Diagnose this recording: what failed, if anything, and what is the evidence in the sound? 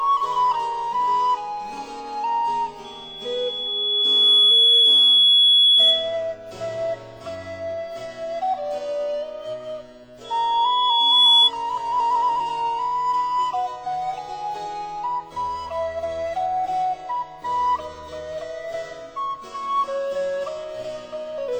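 Loudspeaker feedback squeal, in the acoustic loop from loudspeaker to microphone. A 3.4 kHz tone swells from 2.84 to 6.22 s and from 10.24 to 11.51 s. They build over roughly 1.5 s and 1 s respectively, reaching around 10 dB above the sound. Loop gain exceeded one there.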